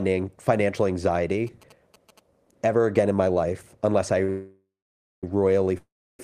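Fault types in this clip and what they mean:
GSM signalling bursts: A nearby 2G phone transmitting short signalling groups is rectified by the audio circuit, giving galloping ticks and buzzes at about 217 Hz under the speech from 1.47 to 2.19 s, roughly 25 dB down. A spectrogram shows evenly spaced vertical striations with a harmonic comb from 217 Hz.
Short stall from a late packet: A packet arrived late, so the receiver held the last sound for 42 ms at 4.24 s, then resumed where it stopped, with nothing lost. The waveform shows a briefly repeated, slightly buzzy cycle, and the spectrogram shows a short smear of flat, unchanging spectrum.
Call audio freeze: Likely a delay in the packets on the way that emptied the jitter buffer. At 4.30 s the sound is stretched into a fading buzz and then silence, a 931 ms gap including 550 ms of silence. At 5.78 s a 413 ms gap follows, 320 ms of it silent. 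The speech then resumes with nothing missing. The waveform shows a decaying tail and then a flat line, and the spectrogram shows a horizontally smeared band fading to blank.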